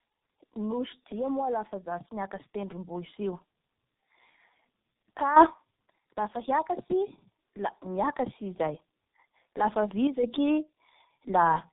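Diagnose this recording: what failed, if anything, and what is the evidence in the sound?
Tandem speech coding runs through the whole clip, a codec-stage fault. The speech sounds rough, muffled and warbly, and nothing is present above 3.8 kHz. That texture points to two speech codecs in a row, an AMR-NB link followed by G.723.1 at about 6.3 kbit/s, with an A-law hop between them. At each border the call was decoded and coded again, so the final coder modelled the previous coder's artefacts instead of clean speech, and the damage compounded.

Automatic gain rising, from 0.54 to 3.46 s, is a call-processing fault. Over roughly three seconds the speech and the background noise swell together by about 6 dB. Because the floor rises along with the talker, this is a gain change, not someone moving closer. An automatic gain control judged the incoming level too low and raised its gain gradually, bringing everything up in step.

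A sudden gain jump occurs between 10.07 and 10.23 s. The level of the speech and the background drops abruptly by about 6 dB rather than fading, so the whole signal shifts at once. That step-like change is likely a digital gain setting or bit shift applied without a ramp, somewhere in the call-processing or driver path, so the new gain took effect from one sample to the next.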